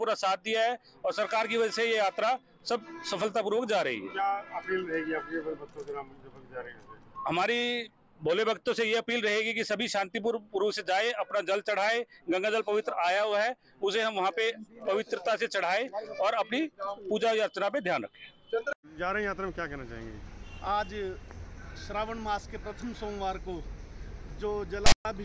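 At 24.86 to 25.05 s, file tags played as audio: tag text was decoded as samples, giving a hard-edged, loud, one-sided rasp that drops into silence where zero padding follows.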